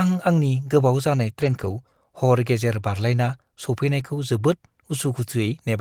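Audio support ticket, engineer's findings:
Lost packets rebuilt from error correction, 1.41–1.71 s just after "आंनि गोबाव जानाय" and again at 3.99 s. No gaps, but the patched spans sound rougher and noisier: about 160 ms, consistent with eight separate packets, then 20 ms. Decoder playing low-bitrate in-band FEC copies carried by the following packets.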